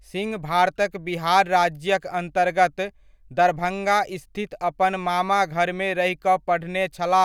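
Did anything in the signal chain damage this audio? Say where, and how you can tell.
No, nothing in the signal chain has left an audible mark on this speech recording. There is no event at any time in the clip that points to damage at any stage between capture and playback.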